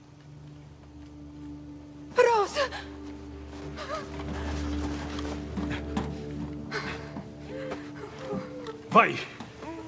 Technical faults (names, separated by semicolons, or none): none